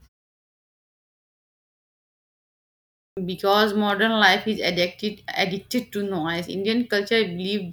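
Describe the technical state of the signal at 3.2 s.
Just before 3.2 s the speech bursts out of silence with its opening sound missing: a clipped start after a pause, with about 49 ms gone between 3.12 and 3.17 s. The output device went idle during the 3.1 s of silence beforehand and had not fully woken when the sound resumed.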